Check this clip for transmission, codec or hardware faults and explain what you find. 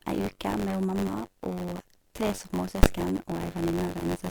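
Two faults are present: a continuous buzz and a single loud bang.

Throughout the speech there is a robotic rattle near 94 Hz. This is buffer tearing: writer and reader cross inside each buffer, fitting a 512-sample size, so roughly a tenth holds audio about 20 ms old.

At 2.83 s there is one sharp bang. Invalid numbers at full scale pinned the output to an extreme value for a 10 ms block, too brief to hear separate edges.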